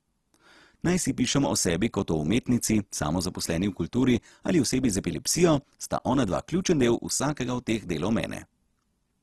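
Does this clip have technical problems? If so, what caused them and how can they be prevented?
Yes. Throughout, the speech sounds grainy and rough, with nothing above 12.4 kHz. This is likely Opus compression at a low rate near 16 kbps, which gives graininess rather than MP3's swirl. Encoding at a higher bitrate prevents it.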